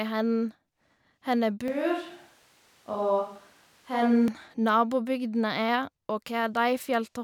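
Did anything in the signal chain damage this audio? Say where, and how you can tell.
Yes. From 1.68 to 4.28 s the speech abruptly turns roomy and hollow, then snaps back. This is likely a switch to a distant microphone at capture.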